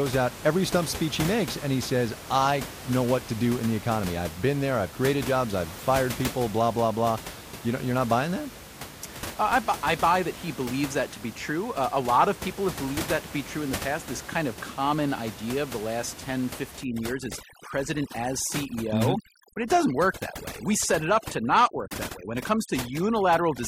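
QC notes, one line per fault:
16.84–23.68 s, overdone noise removal: from this point to the end, a noise reducer set far too strong switches off single frequency bands whenever they come near its noise estimate. The room noise, about 13 dB below the speech, drops and breaks up into twinkling specks, and the quieter parts of the speech are cut along with it. Unlike codec artefacts, the specks sit in the background rather than in the speech itself.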